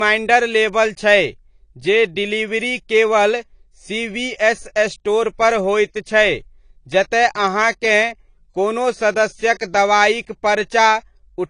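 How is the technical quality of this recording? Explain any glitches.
The technical quality is limited by one fault that runs through the whole clip. The speech has nothing above about 10.1 kHz, so it sounds dull and lacks air. This is likely low-bitrate audio saved at a high bitrate. The dull top and smeared artefacts point to an early low-bitrate encode, such as AAC near 32 kbit/s. Re-saving it as a high-bitrate MP3 cannot restore the lost detail. The damage from the first encode remains.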